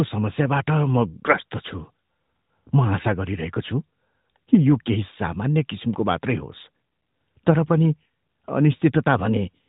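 Nothing stood out on listening to this speech.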